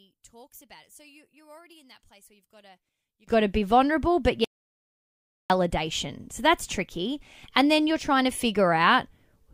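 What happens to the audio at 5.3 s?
At 5.3 s the speech is inside an audio dropout to silence running from 4.44 to 5.50 s, just after "to be vulnerable but". The input was likely lost while recording continued, so about 1.06 s is silence, with no room tone.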